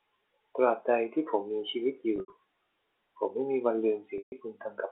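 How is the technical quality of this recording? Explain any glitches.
Two glitches break up this telephone-band recording (about 300 Hz to 3.6 kHz), both packet loss with pitch repetition. From 2.16 to 2.32 s, about 120 ms of audio went missing in scattered gaps over 160 ms, the longest 80 ms. From 4.18 to 4.32 s, about 140 ms dropped in one stretch. In both places the receiver filled each gap by looping the last pitch cycle and fading it out, so the sound briefly freezes into a held, buzzy tone that dies away before the audio returns.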